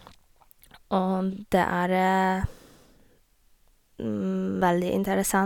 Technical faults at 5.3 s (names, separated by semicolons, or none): none